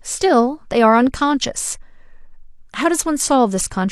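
Nothing goes wrong anywhere in this bit of speech; there's no moment where a technical fault shows up.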